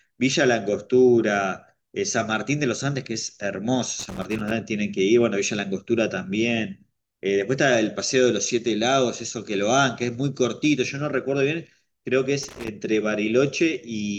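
At 3.99 to 4.51 s and again at 12.43 to 12.68 s, the speech breaks into an irregular scratching burst, a loose connector crackle. A worn or dirty contact is making and breaking as it shifts, chopping the signal on and off and popping where DC sits on the line. On a waveform each burst shows as jagged dropouts and spikes; a spectrogram shows scattered broadband vertical streaks across those spans.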